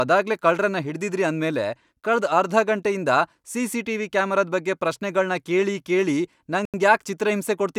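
Right after "ಬಗ್ಗೆ ಪ್ರಶ್ನೆಗಳ್ನ ಕೇಳಿ ಕೇಳಿ", at 6.65 s, the speech just drops out for about 85 ms and resumes at 6.74 s. That's likely a Bluetooth stall: interference delayed packets, the headphones' buffer emptied, and playback sat silent until the resends caught up.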